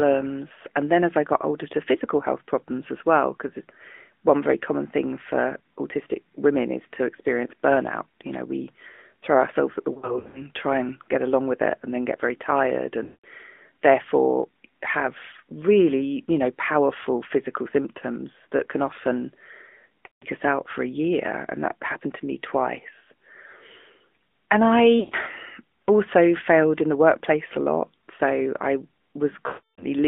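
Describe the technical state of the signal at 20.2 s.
Lost AMR speech frames from 20.06 to 20.25 s: about 160 ms of frames failed their radio checksum, so the decoder kept repeating its last pitch and vocal-tract settings with falling gain, and the speech smears and fades toward silence. Underneath, the AMR narrowband mobile codec at 10.2 kbps keeps the band to roughly 250 Hz to 3.5 kHz and gives a plainly buzzy, synthetic tone.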